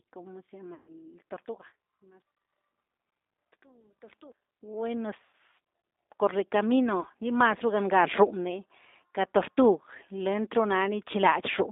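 Right from the start, the speech has that G.729 codec texture: an 8 kbit/s line squeezed into roughly 250 Hz to 3.7 kHz, so it sounds thin and boxy with nothing up top. The damage is plainly audible. The codec rebuilds each frame from a vocal tract model plus a handful of pulses, which gives the speech a slightly rough, synthetic edge.

Then come three dropouts, all VoIP packet loss concealed by the speech codec. The first runs from 0.74 to 0.94 s, just after "como se", covering about 140 ms of missing audio. The decoder keeps extrapolating from its last pitch and filter, so you hear the sound stretched into a buzzy tone or coloured noise that fades out. Because each frame builds on the last, the speech stays weak for a moment after packets return. A shorter 80 ms gap at 5.25 to 5.34 s does the same, and the last one, at 7.01 to 7.05 s, is only a brief 20 ms blip.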